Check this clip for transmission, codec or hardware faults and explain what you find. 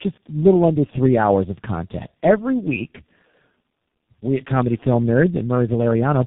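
One fault runs through the whole clip: tandem speech coding. The speech sounds rough, muffled and warbly, with nothing above about 3.7 kHz. The roughness goes beyond what a single low-rate coder would leave, which points to about three speech codecs in a row, with something like a 6.3 kbit/s coder at the end. Each border decodes the audio and encodes it again, and each coder works on the previous coder's already damaged output, so the artefacts add up.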